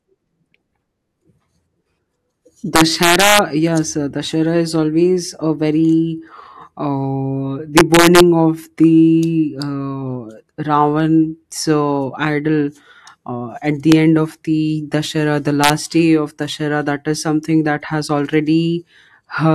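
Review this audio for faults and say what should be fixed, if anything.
Integer overflow cracks the speech at 2.76 to 3.39 s, 7.77 to 8.20 s, 13.92 s and 15.64 to 15.70 s. Peaks driven up to about 4 dB past full scale wrap to the opposite sign. Each wrap jumps across the whole range. Clamp with saturating arithmetic or a limiter before the integer stage.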